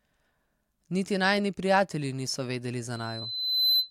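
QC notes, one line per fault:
2.93–3.90 s, loudspeaker feedback squeal: after "najini prijatelji niso vedeli", a 4 kHz tone swells over about 0.7 s to roughly 5 dB above the speech, as the mic-speaker loop gain exceeds one.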